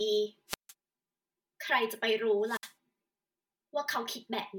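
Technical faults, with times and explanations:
Throughout: channel delay (comb filtering). The speech sounds hollow and phasey, with a thin, boxy colour. One channel arrives roughly 5 ms late, and summing to mono cancels shared content at evenly spaced frequencies, starting near 100 Hz and repeating about every 200 Hz.
0.48–0.73 s and 2.43–2.73 s: wireless microphone squelch dropout. Each begins with a brief surge of hiss, then a hole of near silence lasting about 159 ms and then 65 ms before the speech returns. The FM radio signal fades until the receiver's squelch mutes the output.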